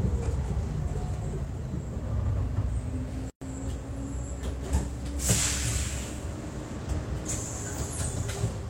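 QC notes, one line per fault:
3.30–3.42 s, gap at a join of encoded pieces: a 117 ms hole with smeared edges, from encoder start delay and last-frame padding left untrimmed.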